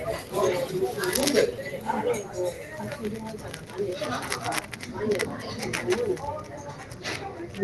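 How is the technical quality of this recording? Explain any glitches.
The main problem is a speech-tuned noise suppressor left on for this everyday-sound recording, active for the whole clip. It hears sustained sounds and ambience as noise and ducks them. Transients pass, but held sounds and decays sink by around 5 dB, so the level pumps and the background keeps thinning out. The top end stops near 12 kHz, consistent with an Opus call codec running at roughly 24 kbps.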